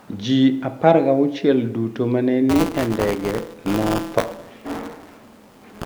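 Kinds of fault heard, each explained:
buffer tearing: The ring buffer's writing program and reading hardware have slipped and cross inside each period, so about a tenth of every buffer holds audio some 20 ms stale. From 2.49 s, after "ma ne", a robotic 172 Hz buzz rides the speech, fitting a 256-sample buffer.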